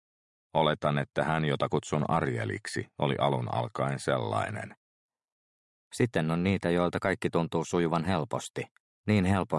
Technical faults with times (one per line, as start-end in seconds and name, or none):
4.74-9.58 wrong sample rate